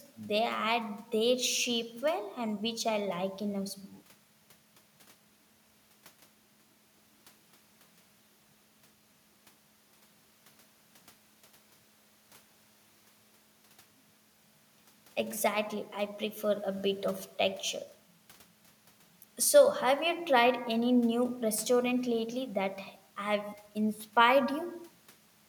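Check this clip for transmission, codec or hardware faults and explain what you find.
Nothing in the speech points to a fault. There is nothing to report anywhere in the recording.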